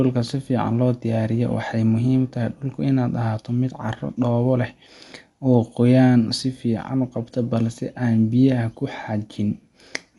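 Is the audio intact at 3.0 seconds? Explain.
No. At 3.0 seconds, as across the whole speech clip, there is plainly audible damage, likely from Dolby Digital compression. Nothing sounds above about 11.4 kHz, and the speech is dull, with a rough, fluttering noise around tonal parts. That points to a low bitrate near 64 kbps, where the encoder drops many frequency lines and the decoder fills them with dither noise. A simple low-pass filter would dull the sound without adding that noisy roughness.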